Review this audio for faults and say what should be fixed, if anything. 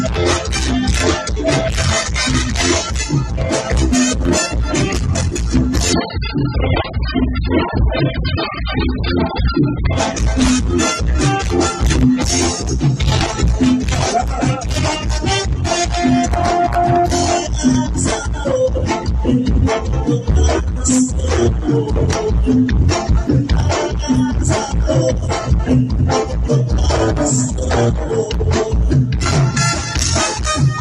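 From 5.93 s to 9.93 s the adaptive stream drops to a lower bitrate. The switch is sudden, with no gap. Everything above 5 kHz vanishes and codec artefacts thicken. This fits a fall from about 96 kbit/s to about 8 kbit/s AAC after the connection slowed. Give the player a larger buffer and a higher bitrate floor so brief slowdowns don't force the lowest rendition.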